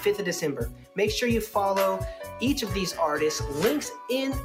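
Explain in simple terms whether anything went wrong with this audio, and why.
Across the whole clip the level quietly swells and dips, so held sounds seem to breathe and tails fade early. That is a noise suppressor applied to music or sounds: a filter built for speech keeps mistaking steady tones and ambience for noise and turning them down.

From 0.7 to 0.98 s the sound suddenly sinks much lower than anywhere else, as if briefly smothered, then recovers. Here the sound was cut by the noise suppressor, which took this stretch for noise and pulled it down hard.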